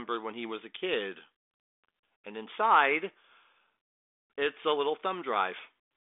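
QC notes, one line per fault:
Nothing to flag here, just the usual telephone band topping out near 3.7 kHz from the 40 kbit/s G.726 link.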